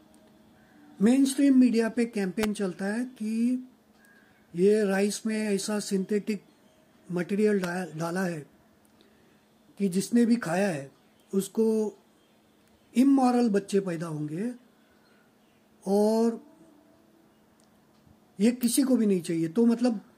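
Sharp snaps sit on top of the audio at 2.43 s, 7.64 s and 18.63 s, each only a few milliseconds long and peaking near -10 dBFS, the middle one quieter at about -15 dBFS. These are electrical switching spikes, likely from a nearby switch or motor arcing and coupling into the line.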